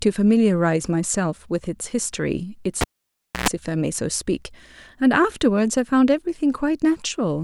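At 2.81 s a pop cuts the speech to near silence for about 0.63 s, with a 0.11 s burst of 60 Hz buzz inside that gap, and a second pop brings it back by 3.49 s. This is the cable pulled and plugged in: the buzz comes from the plug tip touching first as the live cable goes back in.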